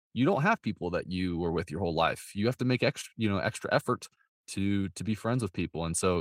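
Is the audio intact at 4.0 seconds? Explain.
Yes, at 4.0 seconds the speech runs on intact, with no audible fault at that moment.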